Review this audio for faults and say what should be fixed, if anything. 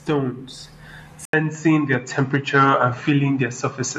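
At 1.25 s the speech drops out for about 80 ms. When it returns and through to the end, it sounds duller and boxier, with nothing above 7.6 kHz, a level shift of roughly 5 dB and a new noise floor sitting around 50 dB below the speech. This change of bandwidth, level and background together is the signature of an input switched to a poorer device, likely a different microphone or a headset's call profile taking over mid-recording. Locking the input device and disabling automatic device switching for the whole session would prevent it.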